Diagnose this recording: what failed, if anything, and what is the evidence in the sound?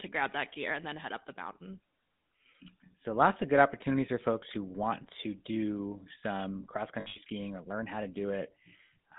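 The whole clip has passed through the GSM full-rate codec. Speech sits between about 150 Hz and 3.7 kHz and has the buzzy, gravelly roughness of pulse-driven excitation, plainly audible and consistent with 13 kbps coding. A spectrogram shows a hard ceiling near 3.7 kHz and grainy, smeared harmonics.

Lost GSM frames occur in transmission between 7.0 and 7.19 s, with about 140 ms missing across 160 ms. That fits several dropped 20 ms frames, the longest run around 70 ms. The decoder repeats the last good frame, so the sound becomes a rough metallic ring. The waveform shows repeated blocks, and the spectrogram shows frozen, striped bands.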